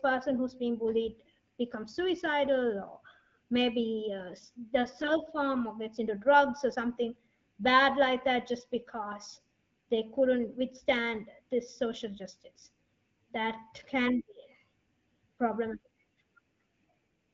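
Speech carried over AMR-WB HD Voice, which sounds clean enough to fit one of the mid rates, picks up a short burst of AMR bit errors from 5.01 to 5.11 s. That span points to about four frames hit. Bits flipped at a rate of a few percent land the excitation pulses in the wrong places and nudge the gain and spectral values off. Pitch and level hold roughly steady, but that moment turns hoarse and gargly.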